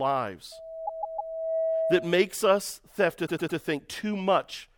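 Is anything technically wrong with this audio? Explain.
Yes, there are two kinds of fault in this speech clip.

Loudspeaker feedback squeal runs from 0.52 to 2.34 s, ending just before "us have". A microphone is hearing the loudspeaker it drives, and around 651 Hz the loop gain passes unity, so that frequency feeds on itself. It swells over roughly half a second into a steady squeal about as loud as the speech. Unlike a whistle or test tone, it grows out of nothing and holds one pitch.

Repeated frames occur twice. From 0.85 to 1.32 s, inside the squeal, a 156.7 ms stretch plays three extra times, adding 470.2 ms; that length fits a run of six compressed frames. From 3.25 to 3.57 s, just after "us have", a 104.5 ms block repeats three extra times, adding 313.5 ms, consistent with four frames. The decoder is replaying identical chunks, so you hear a mechanical stutter. A speaker's own stammer would vary between repeats, and a dropout would remove time, but these repeats are exact copies that make the audio longer.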